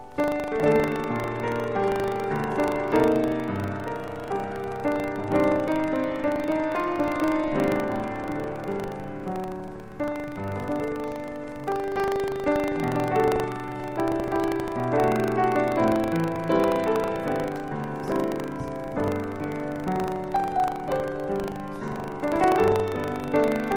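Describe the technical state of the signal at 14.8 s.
Buffer tearing runs throughout: writer and reader cross each period, splicing in a sliver of audio about 70 ms old, heard as a 25 Hz rattle.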